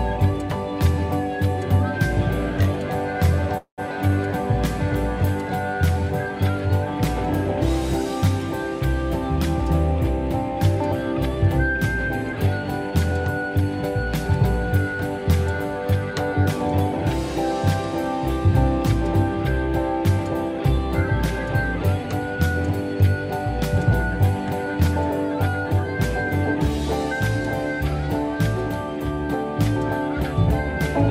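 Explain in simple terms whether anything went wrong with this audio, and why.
Two things went wrong. At 3.57 s there's a call audio freeze lasting to 3.80 s: the last sound gets stretched out, then drops to silence for about 110 ms. That's likely from packets held up in transit, so the receiver ran dry and padded the gap. Nothing is lost; the rest just arrives about 200 ms later.

From 12.33 s to 16.58 s you've got a jitter buffer speed-up. The receiver had more audio queued than it wanted, so it kept snipping out tiny slices, roughly 150 ms in total. That plays that stretch at 103% speed, with the pitch unchanged.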